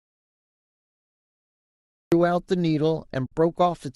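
Audio dropout to silence runs from the very beginning to 2.12 s. The clip opens already inside it, so there is no onset to hear, only silence with no room tone beneath it. The input was likely lost, through a disconnected device, a failed link or a mute, while the recorder kept writing empty samples. When the speech arrives at 2.12 s it starts abruptly, and whatever came before it is gone.

AAC frame loss with muting follows from 3.26 to 3.32 s, a hole of about 60 ms, which fits six lost frames of roughly 10 ms each from the low-delay AAC-ELD coding that runs through the clip. The decoder zeroed the missing spectra, and the overlapping windows taper the speech down into silence and back up again. The gap therefore has soft edges, and the sound is missing for that short stretch.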